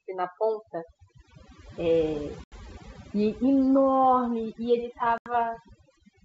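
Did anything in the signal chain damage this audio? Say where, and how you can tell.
Yes. At the call-processing stage, overdone noise removal runs throughout this speech. The suppressor clamps any frequency band near its noise estimate, so the background drops and breaks up into twinkling specks, and quiet parts of the voice are stripped away.

On the network, packet loss on an ADPCM call struck twice, from 2.44 to 2.53 s and from 5.18 to 5.28 s. Each time a handful of packets, about 80 ms of audio, was replaced by a hard-edged silent hole. The decoder's predictor and step size then lost sync with the sender's, so the speech comes back slightly distorted before settling.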